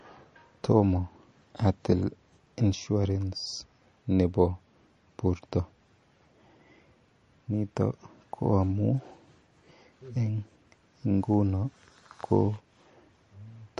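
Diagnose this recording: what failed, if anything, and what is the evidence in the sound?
The failure sits at the codec stage and is present throughout: MP3 compression is the likely cause, with plainly audible damage to the speech. Nothing is left above about 10.6 kHz, and what remains has a watery, swirling quality as weak spectral detail flickers in and out from frame to frame. That flicker separates it from a simple low-pass filter or sample-rate reduction, which would dull the top without the swirl. The damage fits a starved bitrate of around 40 kbps.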